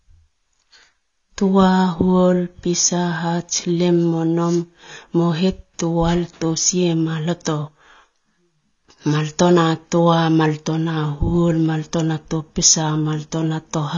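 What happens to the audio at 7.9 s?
At 7.9 s the speech carries the same AAC compression damage heard across the whole clip. Nothing sounds above 6.9 kHz, and the remaining bands have a smeared, warbling, fizzy texture on sibilants. The likely cause is AAC-LC quantising each frame's frequency lines coarsely at a low bitrate, which fits roughly 24 kbps. A simple low-pass filter would dull the top end just as much but leave the remaining sound clean, without this swirling texture.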